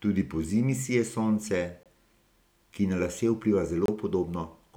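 At 1.83 to 1.86 s, right after "pozimi sije sonce", the speech drops out for about 25 ms, and the same hole returns at 3.86 to 3.88 s, a gap between chunks each time. The audio was carried in 2.0 s chunks, and silence was inserted at each join, interrupting the speech with short holes. On a waveform these show as flat, near-silent stretches; a spectrogram shows clean vertical blank bands.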